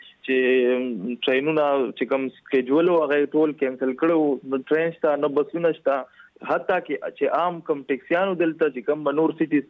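No audible technical faults anywhere in the recording.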